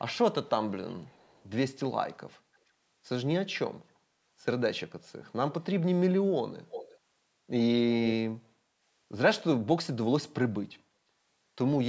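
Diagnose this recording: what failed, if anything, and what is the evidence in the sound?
The call's echo cancellation, most likely on a far end using a loudspeaker, let part of the returned signal through as echo leak. A delayed copy of the speech trails the original by about 0.34 s: faint scraps, roughly 35 dB down, at 0.45–0.49 s and 0.87–1.46 s, then a much stronger stretch, only about 10 dB below the speech, at 6.69–6.99 s. The band-limited call audio, with nothing above 8 kHz, carries the echo too.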